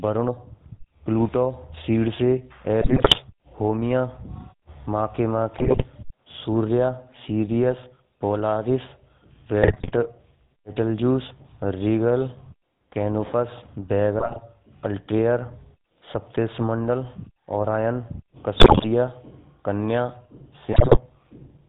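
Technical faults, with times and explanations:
Throughout, GSM full-rate codec: the speech has a buzzy, gravelly roughness and nothing above 4 kHz. The vocal tract is modelled and driven by a coarse, regularly spaced pulse excitation, which fits the 13 kbps full-rate coder and leaves plainly audible damage.
2.80–3.19 s, 5.58–5.84 s, 9.62–9.92 s, 14.18–14.40 s, 18.56–18.86 s and 20.72–20.99 s, GSM bit errors: brief bursts of squawks, pops and gargling. Corrupted filter, pitch and gain values reach the decoder, bending the spectrum or spiking the level frame by frame.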